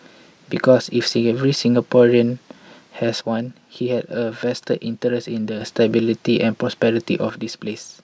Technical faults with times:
3.21-5.61 one channel drops out
7.30-8.03 one channel drops out

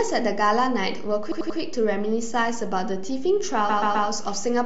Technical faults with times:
0.00-4.65 DC offset
1.31-1.58 repeated frames
3.69-4.07 repeated frames

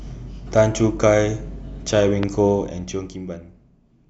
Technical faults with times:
2.23-2.25 loud pop

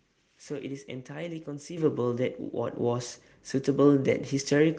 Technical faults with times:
1.77 microphone volume stepped up

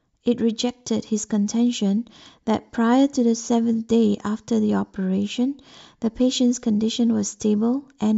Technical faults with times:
none

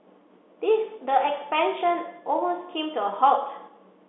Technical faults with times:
none

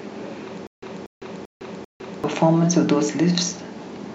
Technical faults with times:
0.67-2.24 stutter with silent gaps

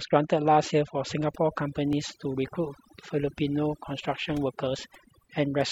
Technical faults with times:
0.00-5.71 overdone noise removal
1.93 overlap between stream segments

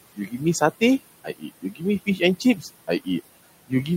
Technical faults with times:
0.00-3.97 noise suppressor artifacts
0.15-0.41 speech cut by the noise suppressor
1.24-1.83 speech cut by the noise suppressor
2.40-2.66 speech cut by the noise suppressor

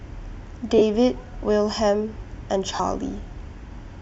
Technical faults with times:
0.78-0.82 lost LE Audio frames
2.75-2.80 lost LE Audio frames

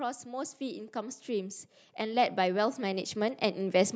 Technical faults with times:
0.23-3.95 automatic gain rising

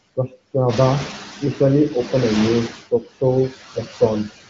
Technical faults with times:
0.00-4.50 noise suppressor artifacts

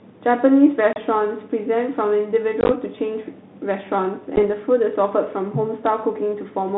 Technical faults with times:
0.93-0.98 packet loss on an ADPCM call
2.61-2.72 packet loss on an ADPCM call
4.36-4.46 packet loss on an ADPCM call

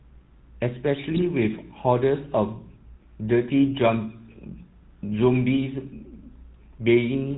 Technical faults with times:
0.00-7.37 GSM full-rate codec
1.14-1.29 GSM bit errors

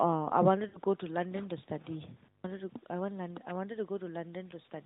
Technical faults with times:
0.68-0.78 lost AMR speech frames
2.22-2.44 intermittent contact

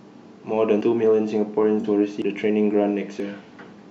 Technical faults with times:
0.81 dropped buffer (overrun)
1.80-1.85 AAC frame loss with concealment
2.22 dropped buffer (overrun)
3.20 dropped buffer (overrun)

